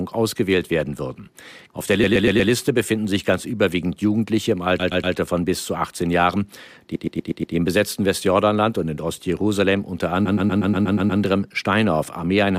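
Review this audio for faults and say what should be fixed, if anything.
Repeated frames cause a stutter at 2.03–2.51 s (just before "befinden sich ganz überwiegend"), 4.79–5.15 s (before "von bis zu"), 6.95–7.55 s (before "im besetzten") and 10.25–11.21 s. Each time, the same 120 ms block replays 4, 3, 5 and then 8 extra times, adding 480, 360, 600 and 960 ms. Make sure the encoder and transport write each compressed frame exactly once, with no buffer resends.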